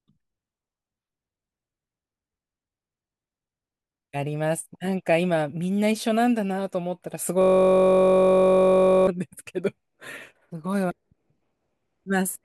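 From 7.42 s to 9.07 s the speech locks into a system hang loop: the driver stalled while the hardware kept replaying one 21.33 ms ring-buffer segment, which fits a 1024-sample buffer. Dozens of exact repeats fuse into a steady 46.9 Hz buzz.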